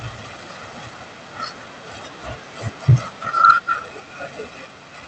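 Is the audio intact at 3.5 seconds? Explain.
No. From 3.44 to 3.51 s the loudest part of the speech turns harsh and crackly, with a flattened, gritty edge on the peak. This is microphone overload: the input level was likely set too high, so the waveform tried to go about 4 dB beyond the converter's ceiling and its tops were sheared off, with roughly a tenth of the samples in that stretch pinned flat at the limit. The squared-off peaks add the distortion heard there.

Immediately afterwards, at 3.51 s, the speech and the background both drop abruptly by about 3 dB, a single clean step rather than a fade. This sounds like a microphone volume step-down, likely the call software reacting to the clipped peak just before it and cutting the device's input gain in one move.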